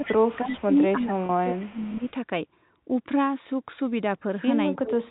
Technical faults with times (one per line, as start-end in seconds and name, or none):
0.00-2.04 speech suppressed in double talk
0.26-0.61 echo leak
1.26-1.29 packet loss with pitch repetition
1.59-2.11 echo leak
4.71-5.11 speech suppressed in double talk